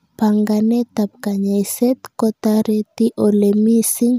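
No technical faults can be heard in this speech recording.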